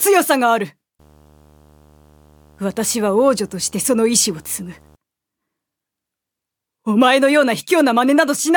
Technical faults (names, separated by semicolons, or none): video or display buzz